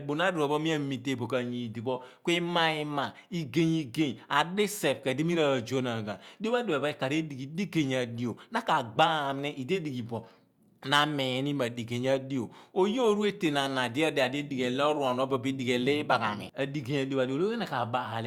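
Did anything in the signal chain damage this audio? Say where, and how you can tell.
No, nothing in this speech recording stood out as damage from any stage of the signal chain on listening.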